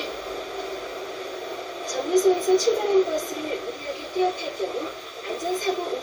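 No technical faults can be heard anywhere here.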